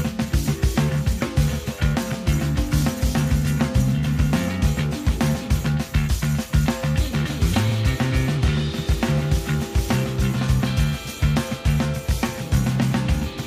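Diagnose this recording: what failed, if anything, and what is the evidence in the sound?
Nothing failed; no faults heard.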